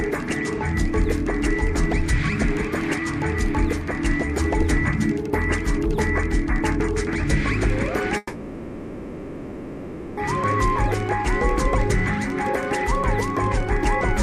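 Call audio freeze at 8.17 to 10.19 s: the sound carries on as a fading buzz or hiss, likely from an emptied jitter buffer, then resumes intact, 2 s late.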